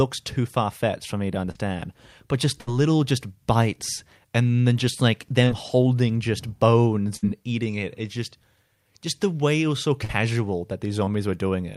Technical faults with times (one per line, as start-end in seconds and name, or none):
1.51-1.57 short concealed packet loss
2.61-2.69 burst of packet loss
5.45-5.48 short concealed packet loss
7.16-7.25 burst of packet loss
10.04-10.11 short concealed packet loss
11.05-11.09 short concealed packet loss